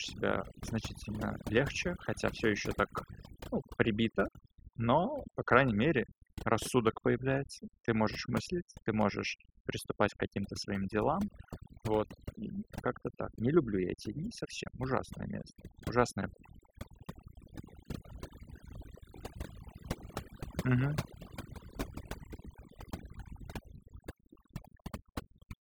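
From the first second to the last, you can hear overdone noise removal. Someone pushed the noise reduction too hard on a noisy recording, so any frequency band that sits close to the tool's idea of the noise gets pulled right down or shut off. The quieter parts of the speech get caught in that too. What's left is a background that's nearly silent apart from little twinkling specks.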